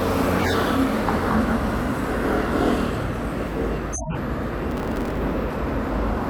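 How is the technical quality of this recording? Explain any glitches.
The recording has three audible glitches of two kinds.

Compressed frames skipped, at 0.38–0.54 s and 3.92–4.17 s: whole coded frames never decode, so the sound jumps ahead about 40 ms, then about 150 ms.

Processor overload crackle, at 4.71–5.18 s: a few dozen late buffers, fitting blocks of around 5 ms, each replay stale audio with hard edges, producing gritty tearing over the sound.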